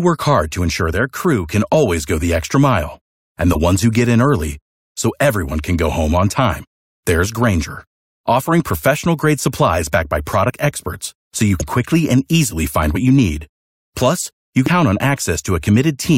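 Compressed frames skipped at 1.73 s: whole frames of the compressed stream never reach the output, so the speech jumps ahead by roughly 20 ms.

Corrupt frame decoded from 3.52 to 3.57 s: the decoder played damaged frames anyway. Misread gains and codes throw energy onto wrong frequencies across a few frames, producing an error peaking around -5 dBFS.

Further skipped frames follow at 10.48 s (about 20 ms lost), 11.60 s (about 100 ms), 12.92 to 12.96 s (about 20 ms) and 14.66 to 14.68 s (about 150 ms). Each is a jump where the speech lurches forward.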